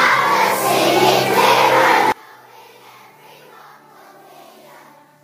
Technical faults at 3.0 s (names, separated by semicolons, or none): one channel inverted